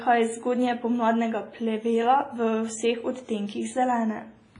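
Throughout the speech, the sound rings and washes, with hiss swelling and fading alongside it. This is likely WMA compression at a low bitrate near 24 kbps. Long transform blocks smear quantisation noise, and weak components drop out. A spectrogram shows nothing above 10.1 kHz and patchy, holed bands below.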